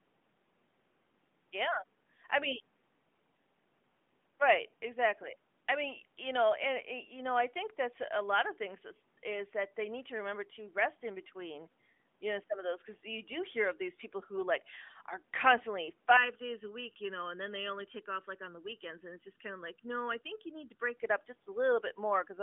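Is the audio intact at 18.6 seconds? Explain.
No. From 16.17 to 20.97 s the speech turns hollow and phasey. That is channel delay (comb filtering): one channel runs late by under a millisecond, and summing to mono cancels evenly spaced frequencies, starting near 700 Hz.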